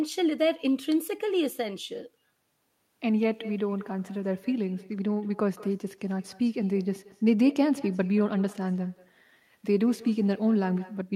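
Speech shadowed throughout by a faint, thin repeat trailing about a fifth of a second behind, some 22 dB down: echo with no canceller, the far loudspeaker's output re-entering its microphone unremoved.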